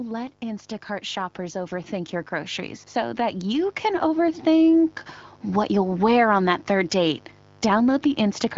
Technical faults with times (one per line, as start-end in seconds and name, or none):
0.00-8.57 mains buzz
0.39-4.45 automatic gain rising